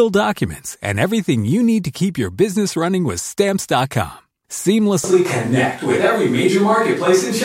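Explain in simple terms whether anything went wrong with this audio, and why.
Two things went wrong. Right after "your business running with", at 3.49 s, there's a tiny skip: an overlap between stream segments cut a sliver out, so the sound jumps rather than going silent like a dropout. From 5.04 s to the end, the voice suddenly turns hollow, roomy and thinner, at about the same loudness, likely a switch to a distant microphone rather than added echo.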